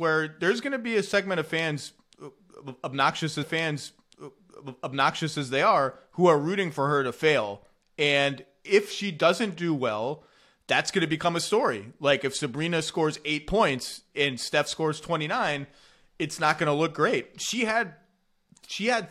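At 3.42 s the speech jumps back and a stretch of about 2.0 s plays a second time, running to 5.41 s before the programme carries on from where it left off. This is a stream segment repeated fault: the player fetched or queued the same chunk of the stream twice, so roughly two seconds of material is inserted again. A short blip marks the discontinuity at the jump back, and the overall clip runs that much longer.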